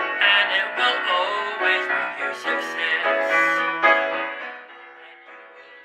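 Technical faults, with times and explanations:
No technical faults heard.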